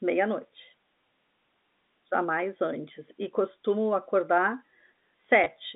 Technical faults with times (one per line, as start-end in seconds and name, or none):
5.44 packet loss with last packet repeated